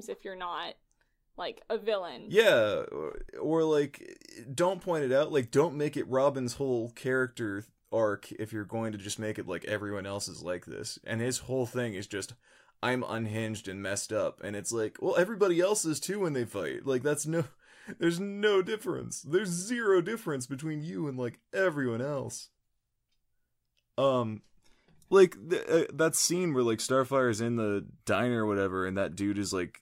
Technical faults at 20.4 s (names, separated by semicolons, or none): none